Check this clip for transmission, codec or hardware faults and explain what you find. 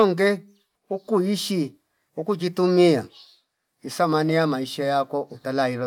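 Nothing stands out here; the speech comes through without any dropouts, glitches or other transmission, codec or hardware trouble that I can hear.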